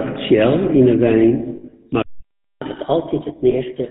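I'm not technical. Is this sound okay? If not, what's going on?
No, it has four separate problems.

The whole recording has passed through the GSM full-rate codec, the original digital mobile phone voice format. It rebuilds speech from a simple model of the throat and mouth, driven by a coarse pulse pattern, and throws away everything above 4 kHz. Here the damage is plainly audible: the speech sounds muffled, with a buzzy, gravelly roughness, like an old mobile call.

There are lost GSM frames in two places. Between 1.56 and 1.73 s, about 120 ms of data went missing, spread over a 160 ms stretch, with the longest gap around 70 ms. Each time, the decoder repeated the last good sound, so you hear a brief rough, metallic ringing instead of the real speech. A second, single dropped frame at 3.50 s gives a much shorter blip of the same kind.

A playback stall hits at 2.02 s. The sound simply cuts off in mid-flow and stays silent for about 0.59 s, resuming at 2.62 s. 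The likely cause is that the player ran short of incoming data, or was held up internally, and had nothing to send to the speaker until it recovered.

Right after that comes catch-up at higher speed, from 2.62 s to the end of the clip at about 3.9 s. To make up the time lost during the silence, the player runs the backlog 1.15 times faster. Because it does this by speeding up the whole signal, the pitch rises too, by roughly two semitones. The speech sounds hurried and slightly chipmunk-like for the rest of the recording.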